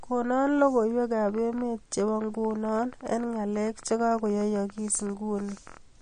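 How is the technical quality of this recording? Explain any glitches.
The technical quality is compromised by two faults: codec damage across the whole speech clip and a run of clicks through most of it.

MP3 compression is plainly audible from start to finish. The speech has a watery, swirling quality, consonant attacks are smeared, and nothing is present above 9.6 kHz. The likely cause is low-bitrate MP3 encoding, consistent with something around 40 kbps. With so few bits available, the encoder drops weaker frequency lines that then flicker in and out from frame to frame, and it cuts off the top of the spectrum at a fixed frequency.

A train of clicks runs from 1.29 s to 5.78 s. It is an irregular ticking at about 11.6 clicks per second, roughly fifty in all, with peaks reaching about the level of the speech. The clicks are similar in shape, and they continue through pauses as well as over the speech. 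The likely cause is an outside source injecting pulses into the signal, such as interference from nearby equipment or a faulty connection or power supply.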